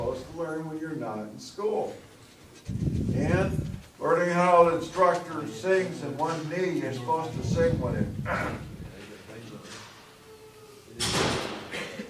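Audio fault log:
No fault found in this clip.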